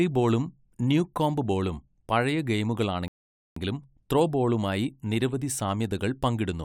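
At 3.08 s the speech drops abruptly into silence. At 3.56 s it picks up again at exactly the point where it broke off, with nothing skipped or repeated, so the gap simply stretches the clip by about 0.48 s. That pattern marks a rebuffering stall. The player used up the audio it had already downloaded, had to wait for more data to arrive, and then resumed playback from where it had paused.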